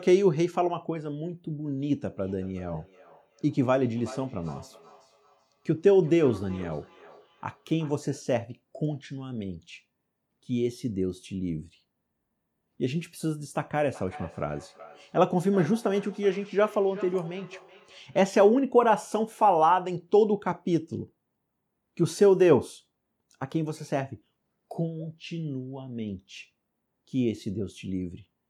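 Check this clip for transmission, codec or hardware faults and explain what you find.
The clip has one fault, appearing twice: feedback echo between two devices, from 1.81 to 8.09 s and from 13.9 to 18.41 s. A second device on the same call replays the speech into this microphone, whose echo canceller ignores it. Each word returns after roughly 0.4 s at about −21 dB and about −19 dB. Unlike room reverb, the repeat is a distinct delayed copy at a fixed spacing.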